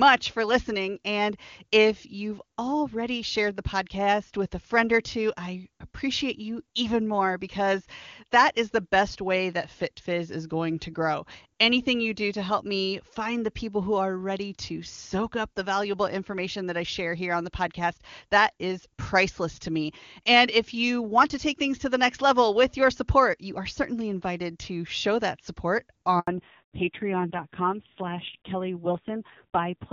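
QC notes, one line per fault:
26.19–26.27 s, handover gap: the call switched networks and no speech frames arrived for 80 ms, so right after "to show that support" the speech dies away within a few tens of milliseconds and stays silent until the new link starts.
26.27 s to end, fallback to narrowband: the call dropped from clean HD Voice to an older narrowband codec, so nothing remains above 4 kHz and the speech turns dull and rough, which points to AMR-NB at a low rate near 5.9 kbit/s.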